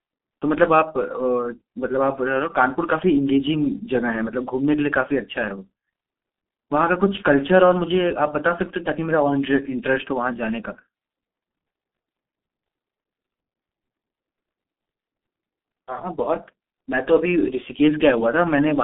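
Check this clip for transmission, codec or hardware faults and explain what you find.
The whole clip carries G.723.1 codec damage, and it is heavy. Speech is confined to roughly 200 Hz to 3.6 kHz, with nothing at all above 3.8 kHz. The codec models the voice in coarse 30 ms frames at a rate that fits about 6 kbit/s, so the speech sounds muffled and hoarse and its consonants smear together. A plain telephone band filter would narrow the bandwidth just as much but leave the sound clean, so the roughness points to the codec.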